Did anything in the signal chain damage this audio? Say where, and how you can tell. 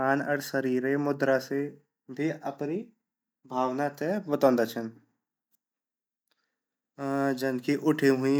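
No, nothing in the chain from capture to playback has left any audible damage on this speech recording.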